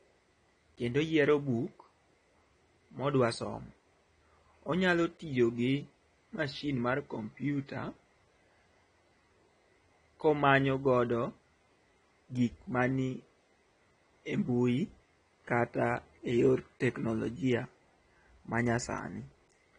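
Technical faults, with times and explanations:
Throughout: low-bitrate audio saved at a high bitrate. The speech has nothing above 10 kHz and sounds dull, which fits a first encoding at a low rate, likely AAC around 32 kbit/s, later re-saved as a high-bitrate MP3 near 320 kbit/s. The second encoding keeps what reached it almost untouched, but it cannot rebuild the treble or detail the first codec discarded. The file is large, yet the sound is still limited by that first encoding.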